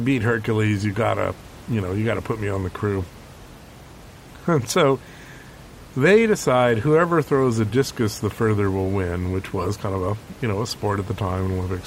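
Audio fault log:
The speech signal is intact at every point, with the room's background sound staying about 21 dB below it as part of the recording itself.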